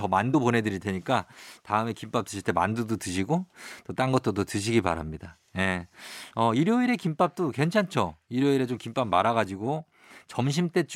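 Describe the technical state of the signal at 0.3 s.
Compressed frames are skipped at 0.33 s. One frame of the encoded speech, which fits a codec frame length of about 26 ms, is never played, either because it is missing from the stream or because the decoder rejected it as damaged. Playback jumps ahead by roughly 30 ms of audio. Since adjacent frames overlap, the seam comes out as a short smeared blip, not a sharp click, and a tiny slice of the speech drops out.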